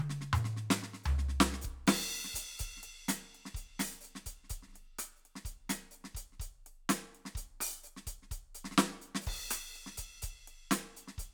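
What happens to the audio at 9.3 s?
At 9.3 s the music plays through intact, with no dropout, glitch or other fault at that moment.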